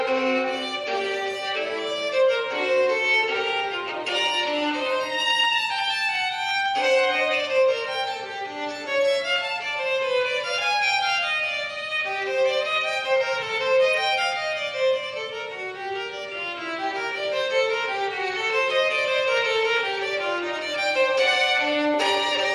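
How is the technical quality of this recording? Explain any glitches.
Clock slip clicks run through almost the whole recording, from 0.14 s to the end. Tiny ticks arrive about twenty times a second and blur into a faint rattle on loud, high or sustained sound, vanishing in silence. The likely cause is two unsynchronised clocks drifting apart by a few hundred parts per million, dropping or repeating one sample whenever the error reaches a whole sample. A spectrogram shows a regular comb of thin vertical lines, and the waveform shows small one-sample steps.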